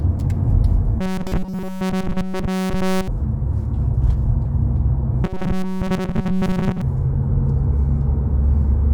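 From 1.01 to 3.08 s, the sounds turn into a rigid metallic buzz at 188 Hz: robotic sound from repeated short buffers. Nearly all of it repeats. It likely comes from a roughly 5 ms block being replayed while fresh audio is skipped. The same buzz returns from 5.24 to 6.81 s, with most of that stretch repeated.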